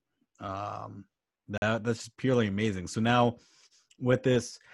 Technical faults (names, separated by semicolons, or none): gap between stream segments